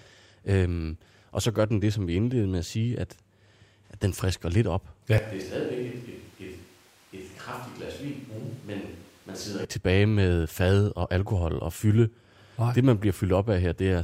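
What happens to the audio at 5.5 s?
A switch to a distant microphone runs from 5.18 s, just after "den frisker lidt op", to 9.65 s, where the close sound returns before "tilbage med fad og". The likely cause is that the close microphone's signal dropped out and a farther one took over. At once the speech turns roomy and hollow, loses bass, falls about 10 dB in level, and carries room noise only about 25 dB below the speech. Both changes are abrupt.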